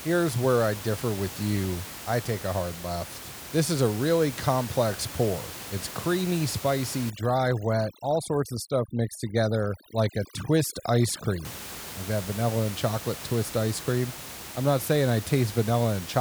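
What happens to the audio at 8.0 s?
At 8.0 s the audio is inside a stretch of overdone noise removal running from 7.10 to 11.45 s, between "creamy spicy" and "like that vanilla and". Bands near the room-noise floor, about 14 dB below speech, get gated away with faint speech detail, leaving a lowered background that breaks up into twinkling specks. A spectrogram shows scattered isolated specks and holes.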